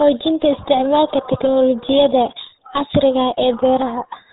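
From start to finish the speech carries the signature of the RealAudio 14.4 codec, the RealAudio 1 format built for dial-up modems. The band stops hard at about 3.8 kHz, so consonants lose their edge and the voice sounds muffled. Heavy coding damage adds a gargly, watery texture to every syllable, which fits a codec running at around 8 kbit/s that discards most of the signal's detail to fit the modem link.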